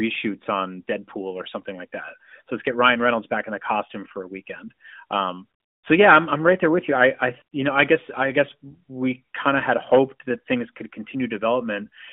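A speech clip carried over an AMR-NB narrowband mobile link, its band confined to roughly 200 Hz to 3.6 kHz with light coding damage consistent with the 12.2 kbps mode, has one AMR comfort noise gap from 5.60 to 5.84 s, between "for a weekend um" and "so yeah I'm I'm". For those 0.24 s the phone judged the talker silent and sent no speech frames, so the receiver generated a steady synthetic hiss from a coarse level and spectrum estimate. On a spectrogram the real background texture gives way to a smooth, uniform noise band with abrupt edges. The waveform shows a flat, even-amplitude stretch switching in and out.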